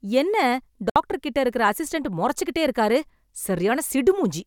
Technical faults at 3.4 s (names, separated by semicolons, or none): none